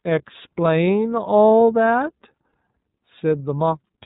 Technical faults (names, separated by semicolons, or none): iLBC codec